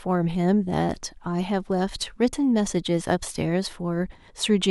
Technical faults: none

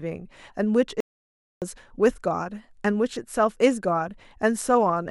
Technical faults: playback stall

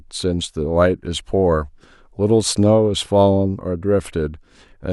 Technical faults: none

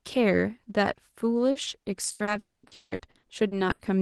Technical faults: repeated packet loss (robotic sound); long network dropout

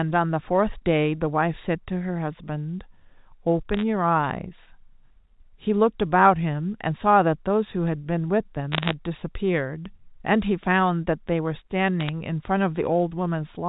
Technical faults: bit errors on a digital phone line

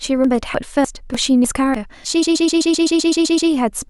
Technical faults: audio missing between chunks; repeated frames

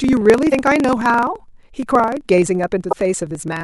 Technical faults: block size mismatch (truncated); damaged data in a compressed stream

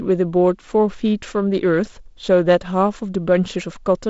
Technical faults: none

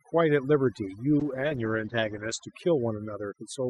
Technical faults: overdone noise removal; call bitrate drop

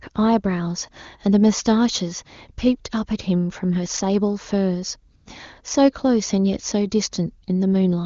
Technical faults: AMR comfort noise

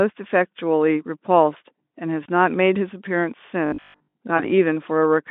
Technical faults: VoIP packet loss concealed by the speech codec; robotic sound from repeated short buffers

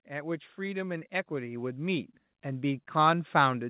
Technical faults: automatic gain rising

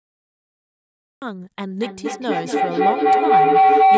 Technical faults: cut-off start; feedback howl

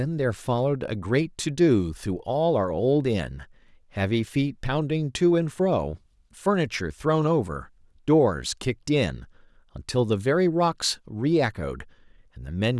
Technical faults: none

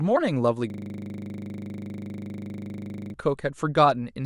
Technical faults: system hang loop

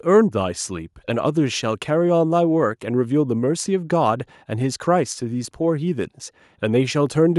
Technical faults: none

